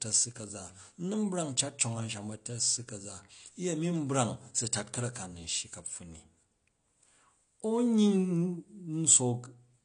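AAC compression damage runs through the whole of this speech recording, from start to finish. Nothing is present above 9.8 kHz, so the top octave is gone and sibilants sound dull and smeared, with a fizzy, warbling edge that is plainly audible. The likely cause is AAC-LC encoding at a low bitrate, which fits roughly 32 kbps: with too few bits, the encoder drops the highest bands and coarsely quantises the rest.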